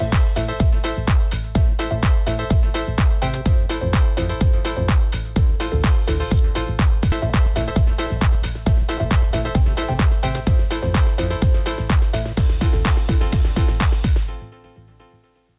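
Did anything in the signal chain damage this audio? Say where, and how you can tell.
Yes. Two faults sit in the call path, one straight after the other.

Skip ahead, 7.12 to 7.14 s: the sound jumps forward with no silence or fill at the join. Roughly 0.4 s of audio is simply absent, and the material on either side is butted together. That points to a network or buffer stage discarding a late stretch while newer audio was already queued, so about 0.4 s of delay was shed in one cut.

Jitter buffer speed-up, 7.22 to 9.95 s: for nearly three seconds the audio runs at about 107% speed while the pitch stays put, so it sounds hurried rather than higher. The buffer was still holding more audio than its target. It trimmed tiny pitch-period-sized slices over and over, removing about a fifth of a second in total until the latency settled. The call codec itself passes nothing above 4 kHz, which fits G.711 A-law.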